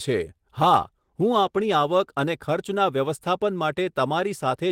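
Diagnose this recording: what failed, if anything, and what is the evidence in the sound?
A call bitrate drop at the codec stage, driven by the call's bandwidth estimate, degrades the speech from 0.65 s to 2.35 s. The speech turns rougher and watery, worst for about 1.14 s, which fits the encoder being pushed from around 32 kbps down to about 18 kbps. With fewer bits, the codec quantises the spectrum more coarsely. On a spectrogram, that stretch shows smeared, blotchier harmonics. The waveform itself stays continuous, with no gaps.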